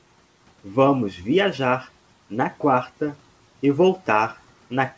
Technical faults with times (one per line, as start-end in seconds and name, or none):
none